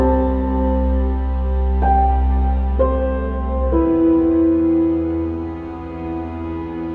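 No technical faults can be heard anywhere in this audio.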